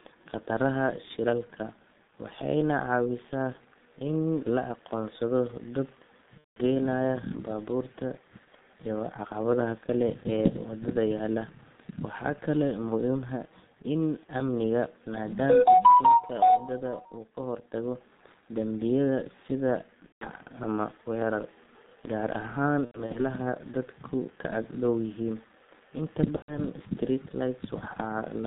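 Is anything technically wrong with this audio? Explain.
Yes. The whole recording has passed through a G.723.1 codec. Nothing reaches above about 3.7 kHz or below 150 Hz, and the heavy damage points to the 6.3 kbit/s mode. This low-rate codec models the voice in 30 ms blocks and refreshes that model slowly, so the speech sounds muffled and hoarse and consonants smear together. Unlike a plain telephone band-limit, the roughness and the blurred transitions come from the coarse modelling and not from filtering alone.

There are also four bursts of VoIP packet loss concealed by the speech codec. The first runs from 6.38 to 6.60 s, right after "in la aqoonsado dad", and about 180 ms of audio is missing. The second runs from 20.06 to 20.28 s, between "hortago dambiyada sida" and "ama weerar", with about 150 ms missing. The third is spread across 22.85 to 23.19 s, just before "dadku ka ag dhow": about 150 ms is lost in pieces over 300 ms, and the longest gap is 90 ms. 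The fourth runs from 26.36 to 26.61 s, with about 120 ms missing.

In each burst the decoder keeps repeating its last pitch and filter at falling gain. The result is a buzzy, stretched tone or a coloured noise that fades, and the voice stays weak until the model recovers. This sets it apart from dropouts or clicks, where the sound simply cuts or jumps.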